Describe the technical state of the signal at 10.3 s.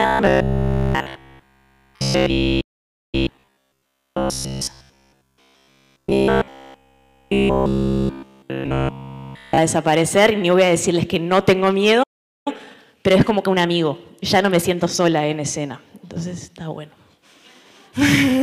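At 10.3 s the signal is intact, with no audible dropout, distortion, glitch or other technical fault.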